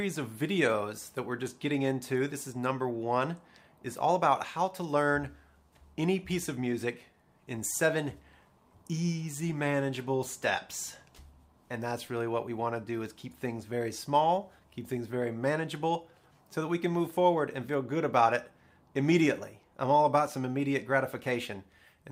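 Nothing in this audio stands out as a technical fault, so there's nothing here to point to or explain.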